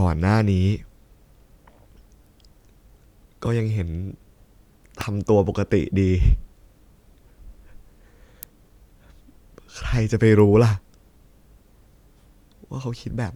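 Speech, with two electrical switching spikes. Sharp snaps sit on top of the sound at 5.01 s and 8.43 s. Each is likely a nearby switch or static arc coupling into the audio line.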